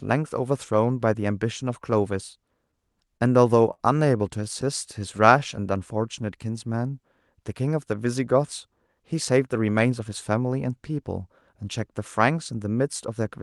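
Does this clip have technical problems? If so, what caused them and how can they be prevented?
Yes. Two short stalls from late packets occur at 3.17–3.22 s and 3.74–3.81 s. In each, the jitter buffer ran dry and the receiver held the last sound for 32 ms and then 47 ms, producing a brief smear. A larger or faster-adapting jitter buffer target would absorb this packet jitter.

A jitter buffer slow-down runs from 4.99 to 6.91 s. The receiver repeated pitch periods to rebuild its reserve, adding 129 ms and slowing the speech to 94% speed at unchanged pitch. A steadier network path reduces how often the buffer needs to be refilled this way.

A jitter buffer speed-up runs from 9.14 to 10.45 s. The receiver trimmed around 150 ms of pitch periods to shed excess delay, giving 109% speed and hurried delivery. Smoothing packet bursts upstream, so delayed packets don't arrive in clumps, prevents this catch-up.

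The Opus call path itself contributes a band limit near 12 kHz.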